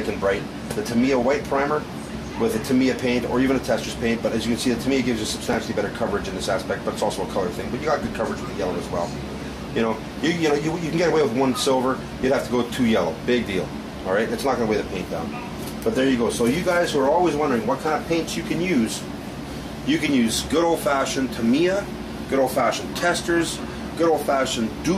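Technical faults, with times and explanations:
5.53 s, chunks out of order: one 5.8 ms chunk of audio plays one chunk late, after the chunk that should follow it. Nothing is dropped, but the reordering puts three hard joins within about 12 ms, heard as a brief jumbled moment.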